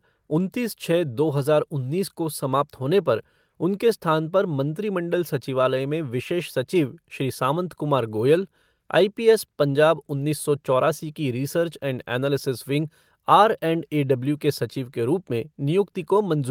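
Nothing in the recording stands out as a technical fault at any point, so there's nothing to flag here.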